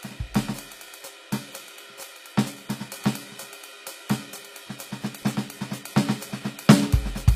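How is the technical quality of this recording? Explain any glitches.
Technical quality is compromised by audible codec damage from start to finish. Throughout, the music shows HE-AAC compression, likely from a low-bitrate stream around 24 kbps: treble is rebuilt from copied lower bands, so cymbals and sibilance sound gritty and metallic. A spectrogram shows blocky, repeated upper-band patterns ending in a hard ceiling at 15.5 kHz.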